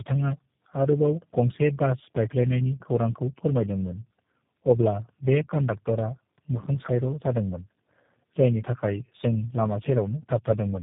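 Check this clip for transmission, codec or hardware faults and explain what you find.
One codec fault runs through the whole clip.

Tandem speech coding, throughout: the speech passes through three low-rate speech codecs in a row, which fits G.729A, then GSM full rate, then G.729A again, joined by G.711 links. Each coder re-encodes the previous one's damage, so the speech sounds rough, muffled and warbly, with nothing above 3.7 kHz.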